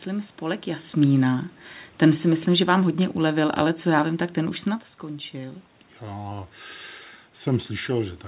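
From 2.01 to 4.64 s, speech and room noise sink together by about 4 dB: automatic gain falling, the gain control easing down because the input was too loud or too noisy.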